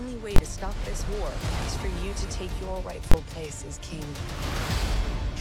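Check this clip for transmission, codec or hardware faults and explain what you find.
Two loud bangs mark one processing fault. At 0.36–0.38 s and 3.12–3.14 s, invalid numbers at full scale pin the output to one extreme value for about 21 ms, which fits a 1024-sample block. Ordinary clipping only flattens loud peaks, but here the whole block jumps to the rail regardless of the sound, so each event is a single bang.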